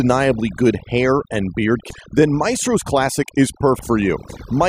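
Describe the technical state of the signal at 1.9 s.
Right after "good hair and beard", damaged data in a compressed stream hits from 1.90 to 1.94 s. The decoder misreads corrupted frames and loses sync, giving a brief blip. Under it, overdone noise removal is active. Bands near the noise estimate are pulled down hard, leaving a lowered, twinkling background.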